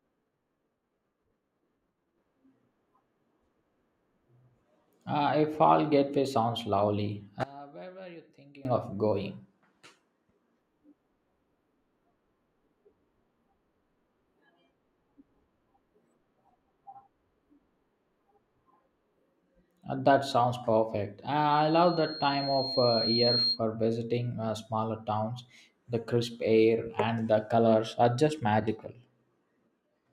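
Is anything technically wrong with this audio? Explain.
Yes, two problems. From 7.43 to 8.65 s, right after "fall getaway sounds lovely" and before "of going", the speech drops by about 21 dB to a faint copy. That's likely one channel inverted: when left and right are summed to mono, the shared centre content cancels.

From 21.51 to 23.60 s, just before "visiting uh smaller towns", there's a loudspeaker feedback squeal at 4.2 kHz. The mic is hearing its own speaker. The tone keeps reinforcing itself, building over about two seconds until it's roughly as loud as the speech.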